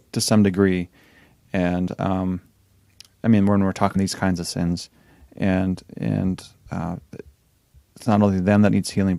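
At 3.95 s, between "I mean when we're" and "kinds of sins and", compressed frames are skipped: roughly 70 ms of audio vanishes, so the speech jumps ahead.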